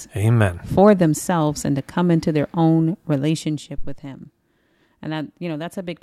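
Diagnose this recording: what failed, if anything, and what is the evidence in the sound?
A deep low thump lands at 3.78 s and clears by 3.99 s, decaying in 46 ms. This is a phantom power thump at the analogue input stage: switching the supply on a live line pushes a DC step through the coupling capacitors into the preamp.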